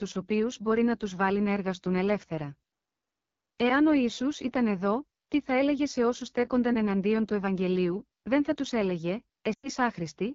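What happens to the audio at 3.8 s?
At 3.8 s the speech is passing through an AMR wideband (HD Voice) codec, as it is for the whole clip, at a low rate that fits the 8.85 kbit/s mode. The pulse-driven vocal tract model gets too few bits, so the voice turns rough and raspy, with noise-filled highs above 6.4 kHz.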